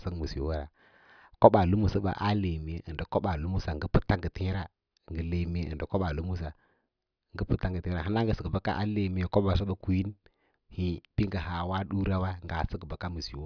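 No technical faults are audible anywhere in this recording.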